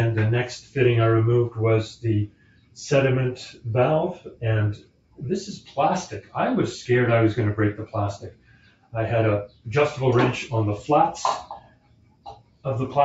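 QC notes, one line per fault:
Throughout: noise suppressor applied to music or sounds. A speech-tuned suppressor stays active across the clip and classifies steady content and ambience as noise. Its gain swings by around 10 dB, so sustained sound and decays sag while onsets pass, producing audible pumping and a thinned texture.
2.27–2.77 s, 4.77–5.19 s, 5.57–5.72 s, 8.24–8.93 s, 9.48–9.66 s, 11.59–12.65 s: sound cut by the noise suppressor. At these points the suppressor pulls the sound down harder, by about 12 dB at its deepest (about 10 dB at 5.57 s). Held portions and tails are truncated. The final stretch is the longest, about a second.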